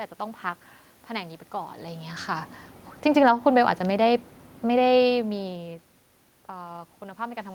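From 3.07 s to 5.66 s the level sinks by about 4 dB. This is automatic gain falling: the gain control judged the input too loud, or its background noise too strong, and eased its gain down. Speech and room noise drop together, unlike the talker movements near 1.5 s and 5 s.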